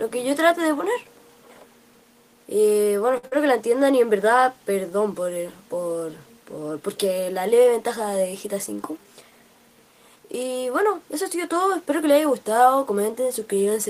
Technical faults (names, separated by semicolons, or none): short stall from a late packet; short concealed packet loss